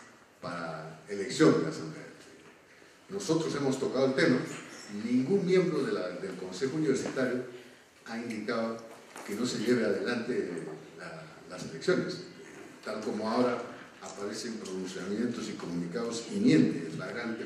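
No technical faults are audible.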